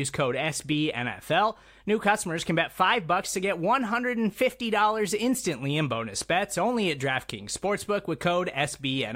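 A steady low drone at 50 Hz sits under the speech throughout, about 35 dB down: mains hum from a ground loop or nearby transformer.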